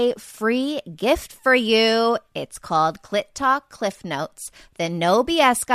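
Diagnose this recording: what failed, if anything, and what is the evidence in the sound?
No audible faults found.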